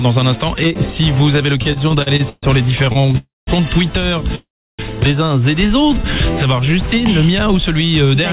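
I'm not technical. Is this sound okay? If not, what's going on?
No. The audio came through a phone-style call link that carries nothing above 4 kHz, and it has three kinds of delivery problems.

Repeated stalls (stutter) happen from 1.62 to 2.45 s and again from 2.85 to 3.15 s. The sound keeps catching, like a skipping record, because pieces of the call arrived late and the receiver briefly stretched the last bit of sound each time. There are nine tiny breaks in the first stretch, the longest about 0.14 s, and five in the second, none longer than about 0.03 s. Nothing is lost, but it drags. Many small hitches in a row set this apart from a freeze.

A call audio freeze is a single, longer hold-up. At 3.17 to 3.49 s and again at 4.35 to 4.81 s the sound hangs on its last bit, then drops to silence for about 0.19 s the first time and about 0.33 s the second. After that it carries on exactly where it stopped, so nothing is missing and there is only a pause. 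This is likely caused by the call's data being held up in transit.

Jitter buffer slow-down appears at 5.67 to 6.03 s and at 6.47 to 6.76 s. There are no breaks here. Instead the sound plays slightly slow, at about 90% speed, while the pitch stays the same, so it comes across as drawn out rather than interrupted. The receiver is quietly repeating tiny slices of sound to build up a safety reserve, which adds about 0.04 s each time.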